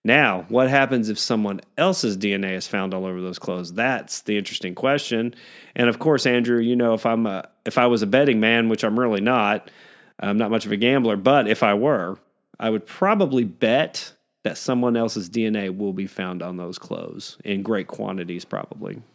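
No technical faults can be heard in this speech; the call microphone processing trims the lowest bass, as it normally does.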